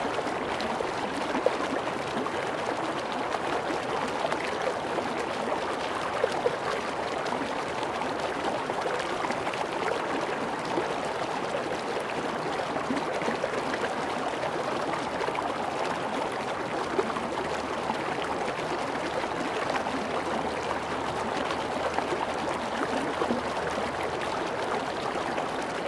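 Sound recording, no technical faults detected.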